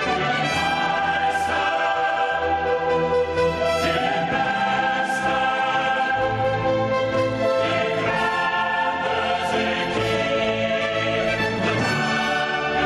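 Gain pumping runs throughout: the level ducks around 10 dB under loud sounds, likely from excess input gain hitting a fast limiter, leaving a flattened, squashed waveform.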